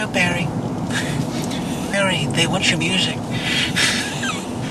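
At 1.93 to 1.95 s a skip ahead drops about a second of audio; unlike a dropout, there is no silent gap, just an abrupt join across the missing stretch.

From 2.53 to 3.40 s, jitter buffer speed-up trims pitch periods to run about 24% fast, removing roughly a fifth of a second. From 4.05 to 4.69 s it runs 7% fast. Pitch stays unchanged, unlike resampling.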